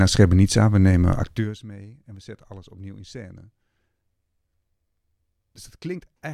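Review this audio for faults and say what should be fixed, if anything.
No faults found; nothing needs fixing.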